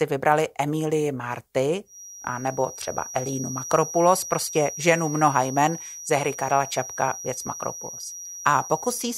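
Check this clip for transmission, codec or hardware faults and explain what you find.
One fault is present: a feedback whistle running through most of the speech. From 1.84 s to the end of the clip, a thin, steady tone at 5.8 kHz sits behind the speech, roughly 15 dB below it and swelling and fading slowly in level. The likely cause is a loudspeaker-to-microphone loop held just at the edge of feedback. The gain around that loop peaks at this one high frequency and sustains it without building into a full howl.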